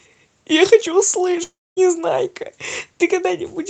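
From 1.43 s to 1.79 s the speech breaks off. The last sound smears into a fading buzz, then goes nearly silent for about a quarter second. Speech returns with a third of a second missing. The likely cause is a long network dropout.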